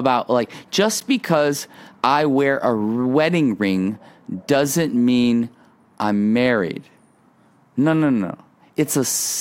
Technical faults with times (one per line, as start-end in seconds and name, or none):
1.00 block of digital silence